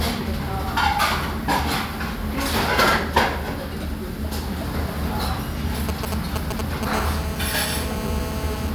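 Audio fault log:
5.89–6.85 s, GSM signalling bursts. A galloping pattern of short buzzes cuts into the sound. A nearby 2G phone is sending brief groups of radio bursts while it signals to the network. The audio circuit rectifies each radio pulse into a click. Within each group the pulses repeat at 217 Hz, so they fuse into a short buzz. The bursts sit at roughly the same level as the sound itself.
6.93–8.70 s, GSM phone buzz. A hard, raspy buzz at 217 Hz comes in and holds steady to the end. It has no relation to the sound underneath. The phone is now in a call and transmits a burst 217 times a second without a break. Rectified in the audio circuit, those pulses become a harsh tone rich in harmonics. It sits about 9 dB below the sound.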